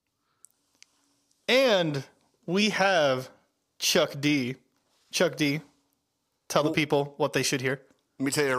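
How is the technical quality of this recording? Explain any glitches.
No technical faults can be heard in this recording. There are no glitches to explain anywhere in the speech.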